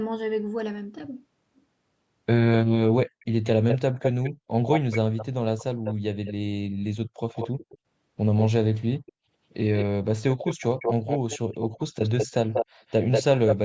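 From 3.2 to 6.33 s, 7.34 to 7.78 s, 9.06 to 9.12 s and 9.77 to 13.56 s, a delayed copy of the speech trails it by 189 ms. This echo leak likely comes from a far-end loudspeaker echo that the canceller missed. The copy is about 5 dB down first, about 10 dB down next, barely audible in the brief third burst, and as loud as the speech in the last stretch. The fixed 189 ms gap separates it from room reverberation, which smears continuously rather than repeating.

Within that last stretch, from 11.84 to 11.97 s, speech suppressed in double talk plunges the level by roughly 40 dB for about 150 ms, likely while both sides overlap. Unlike a network dropout, the cut lines up with the competing echo.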